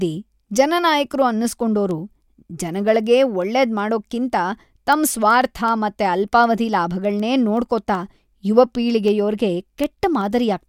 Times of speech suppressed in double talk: none

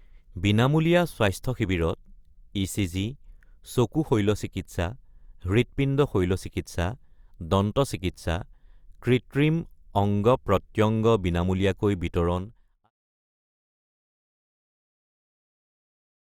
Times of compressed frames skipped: none

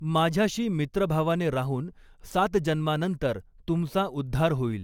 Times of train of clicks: none

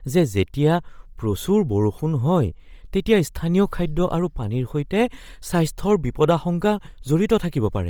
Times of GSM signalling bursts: none

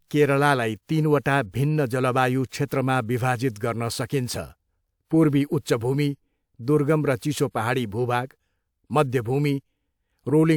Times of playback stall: none

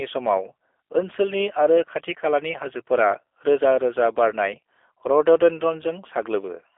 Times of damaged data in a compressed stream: none

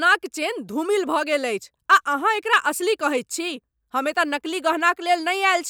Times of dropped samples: 2.48

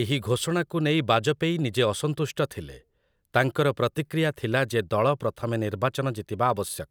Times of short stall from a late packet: none

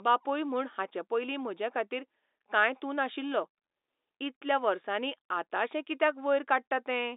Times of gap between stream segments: none

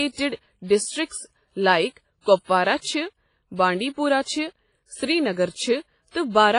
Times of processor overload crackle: none

